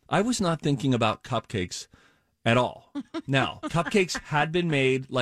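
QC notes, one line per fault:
3.65–3.69 s, damaged data in a compressed stream: a brief chirp, squawk, click or short hole in the speech, as the decoder misreads a corrupt frame and resyncs on the next header. A spectrogram shows a short broadband smear; the waveform shows a discontinuity.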